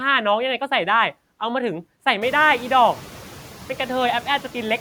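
A speech recording with noise suppressor artifacts running through the whole clip. The suppressor pulls down bands it judges to be steady noise, frame by frame, but only by about 3 dB here, so the background dips slightly in pauses and swells back under speech. The room noise steps up by about 20 dB around two seconds in, settling about 19 dB below the speech.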